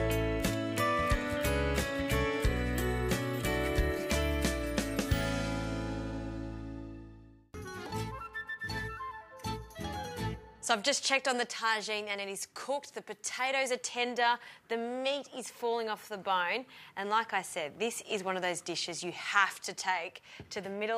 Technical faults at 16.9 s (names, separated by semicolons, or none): none